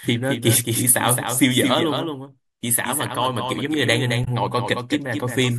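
Throughout the speech, the audio was likely captured a second time by a slower path, producing a doubled audio track: a dry, full-band copy trails about a fifth of a second behind, roughly 5 dB quieter. From 4.24 to 4.28 s, damaged data in the compressed stream forces the decoder to lose sync and hunt for the next frame, heard as a brief glitch.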